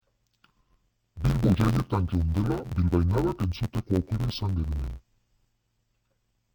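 From start to finish the speech sounds dull and robotic, with a steady buzz at about 86 Hz and no clear drop in pitch. The fault is interleaved audio read as planar. Each block of alternating left and right samples is split in half, the first half taken as left and the second as right, so each channel plays its samples at half speed. With blocks only about 11.6 ms long, which fits a 512-sample block, the pace holds while the block rate turns into a buzz.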